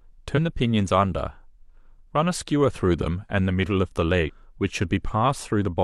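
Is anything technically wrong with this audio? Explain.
Yes. Two brief glitches break into the speech, from 0.33 to 0.39 s and from 4.23 to 4.30 s, each lasting roughly 60 to 70 ms. They come from damaged data in a compressed stream: some bytes in the encoded file were lost or corrupted, so the decoder misread those frames, lost its sync, and had to hunt for the next valid frame header before clean speech could resume.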